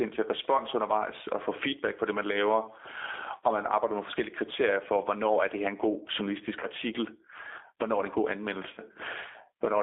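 Gain pumping runs through the whole of this speech recording. The gain swings by around 25 dB, pulling down under each louder syllable, flattening the dynamics. The likely cause is input gain set far too high, with a fast limiter clamping every peak. The G.729 codec, also present throughout, confines the speech to a 300 Hz to 3.6 kHz telephone band and gives it a plainly rough, synthetic texture, consistent with an 8 kbit/s G.729A stream rebuilding the signal from a vocal-tract filter, pitch predictor and sparse pulses. VoIP packet loss concealed by the speech codec appears at 6.60 to 6.67 s and again at 8.73 to 8.80 s, just after "er det en god". Each time the audio smears into a brief buzzy or noisy, fading extension as the decoder extrapolates from its last pitch and filter. The gaps fit about 20 ms and 40 ms of missing audio, consistent with one and two lost packets.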